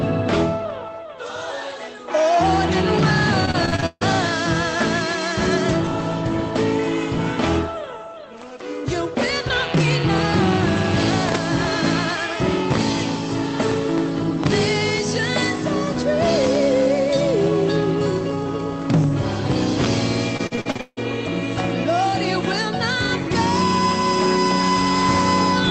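From 3.45 to 4.03 s, repeated packet loss makes the sound choppy and robotic. Seven gaps are each patched by extending the last sound, the longest 148 ms. It recurs from 20.37 to 20.99 s: seven gaps, longest 159 ms, over half concealed.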